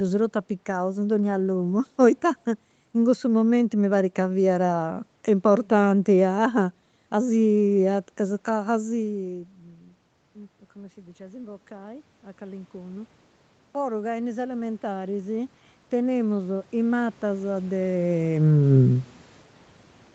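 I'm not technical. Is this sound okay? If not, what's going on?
No. Automatic gain rising happens twice, from 10.74 to 13.16 seconds and again from 13.74 to 17.95 seconds. The voice got quieter at the microphone around 8.5 seconds, as if the speaker leaned back. The call's automatic volume control then slowly turned itself up to compensate. Because it can't separate the voice from the room, the background noise swells along with the speech, the second time more strongly.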